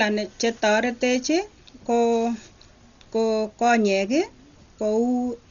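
Throughout, the speech is dull, cut off above 6.9 kHz, with rough fluttering noise: likely heavy Dolby Digital compression, fitting roughly 40 kbps, dither-filling bit-starved lines.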